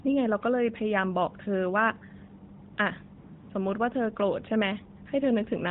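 AMR comfort noise appears at 2.74–2.78 s and again at 3.18–3.50 s. The phone treated these stretches as silence and stopped sending speech frames, so the receiver filled the gaps with smooth synthetic noise. The real background drops out and a steady hiss switches in.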